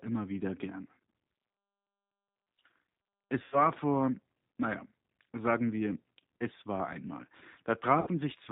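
Right from the start the whole recording carries the G.729 codec sound, and it's plainly audible: nothing gets through above 4 kHz, so the speech sounds boxed-in and a bit rough and synthetic. That's what you get when a decoder rebuilds each 10 ms frame from a vocal tract filter, a pitch predictor and a handful of pulses, and the character fits the 8 kbit/s G.729A variant. At 3.44 s there's VoIP packet loss concealed by the speech codec, running to about 3.69 s. About 80 ms of audio went missing, which points to four lost packets. The decoder kept extrapolating from its last pitch and filter settings with falling gain, so you hear the sound stretched into a buzzy tone or coloured noise that fades. Because each frame builds on the one before, it stays weak a little longer before "vor naja sagen wir" comes back. The same concealment happens again from 8.01 to 8.09 s, this time covering about 60 ms, consistent with three dropped packets, and the sound is again briefly stretched and fades.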